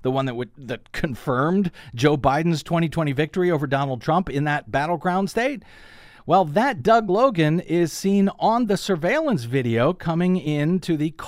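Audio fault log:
No faults heard anywhere in this speech recording.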